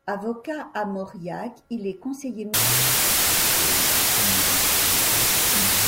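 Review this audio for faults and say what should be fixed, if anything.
From 2.54 s to the end, wrong sample width buries the speech in loud noise at half speed. It fits 32-bit samples read as 16-bit ones. Each sample splits in two. Prevent it by reading the sample format from the file header rather than assuming it.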